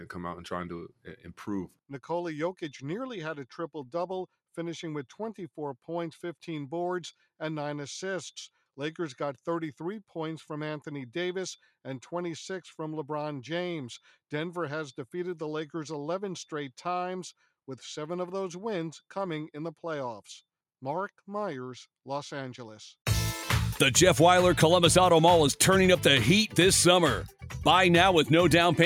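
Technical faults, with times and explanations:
0.89 to 1.26 s, sound cut by the noise suppressor: the suppressor mistook part of the audio for background noise and pulled its level down harder than the material around it, with the deepest dip about 11 dB. Only around 150 ms within that span is affected, so the sound briefly sags rather than vanishing. Sustained or decaying parts lose the most, because the suppressor trims them as if they were noise, while sharper onsets mostly get through.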